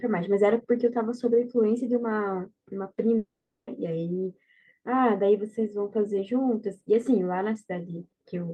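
A long network dropout is the likely cause of the break from 3.17 s to 3.69 s: the audio stream stopped arriving for about half a second, leaving the receiver nothing to play. It stretched the last sound into a short buzzing tail that fades within the first tenth of a second, then left about 0.41 s of silence. When the speech returns at 3.69 s, the 500 ms lost in the gap is never heard, so the speech jumps forward.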